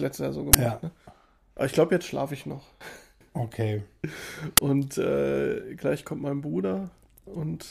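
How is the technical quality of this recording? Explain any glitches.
The recording is marred by two brief, harsh glitches. Uninitialised buffer, at 0.53 s and 4.57 s: each time, a block of playback memory was sent out before any real audio had been written into it, so whatever stale data sat there was played as samples. The result is a sudden, loud crack lasting about 11.6 ms, a length that fits a 512-sample buffer.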